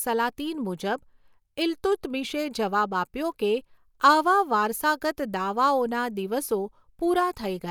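No technical faults are audible.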